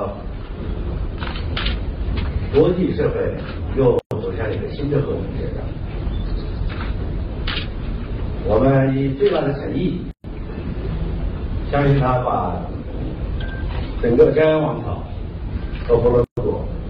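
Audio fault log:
3.99–4.11 s, 10.11–10.24 s, 16.24–16.37 s: gap at a join of encoded pieces. Silences of 122, 130 and 130 ms recur every 6 s where separately encoded segments meet with their start delay and end padding left in. The sound resumes where it stopped. The waveform shows flat stretches with smeared edges, and the spectrogram shows blank vertical bands.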